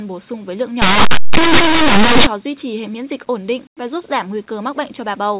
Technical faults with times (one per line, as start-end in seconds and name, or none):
0.82-2.27 linear audio read as companded